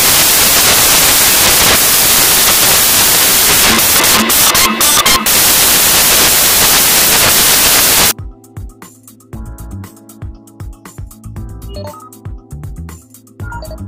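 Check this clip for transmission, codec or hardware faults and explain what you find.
There is one fault. From 0.0 to 8.11 s, loud, harsh broadband noise swamps the sound: samples built from the wrong bytes, so the fast-changing low bits dominate each value.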